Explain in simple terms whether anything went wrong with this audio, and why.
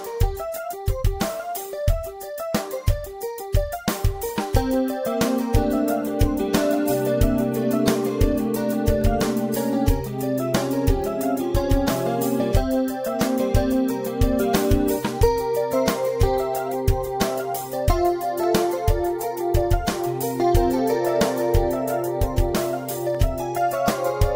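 A regular click or pop comes back about every 2.36 seconds, roughly ten times from 1.93 s to 23.15 s. This is likely clock drift buffer slips: two devices passing the audio along each keep their own time, one running slightly fast, around 70 parts per million. The buffer between them slowly overfills or runs dry, so every few seconds a handful of samples gets dropped or repeated, leaving a tiny jump you hear as a click.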